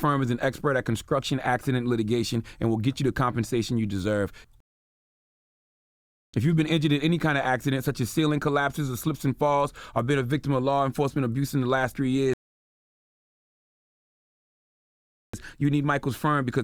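At 4.60 s the sound drops to silence and picks up again at 6.34 s, then does the same from 12.34 s to 15.34 s. Both are rebuffering stalls: the player ran dry of downloaded audio and simply waited for more to arrive. Nothing gets skipped, since playback resumes exactly where it stopped, but the gaps add about 1.7 s and then a full 3 s of dead air.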